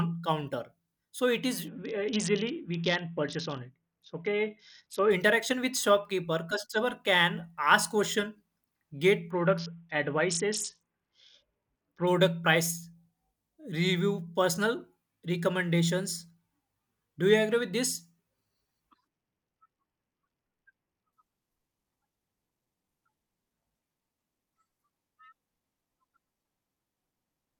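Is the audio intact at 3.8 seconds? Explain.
No. At 3.8 s the speech sits inside a Bluetooth SBC bit pool drop running from 1.68 to 5.11 s, just after "it is" and ending before "interaction with shopkeeper customer". The link starved the encoder of bits, which fits a bit pool falling from 28 to 6 and roughly 60 kbps. The top sub-bands got few or no bits and the rest were coarsely quantised, so the treble dulls and gritty noise rises. A plain low-pass filter would dull the sound without adding that grit, and it would not recover at 5.11 s.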